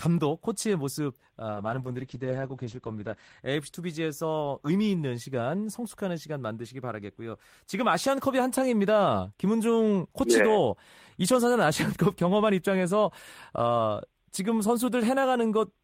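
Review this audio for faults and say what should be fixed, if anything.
From 1.54 s to 3.47 s a call bitrate drop leaves the speech muffled and rough. The encoder coded coarsely and cut everything above 8 kHz, which fits a fall to about 10 kbps. On a spectrogram this shows as a blank band. A higher minimum bitrate prevents it.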